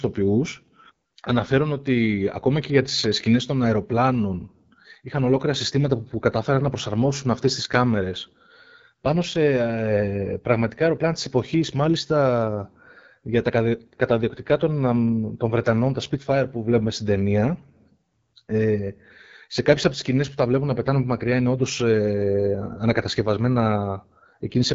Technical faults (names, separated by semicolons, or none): AMR wideband (HD Voice) codec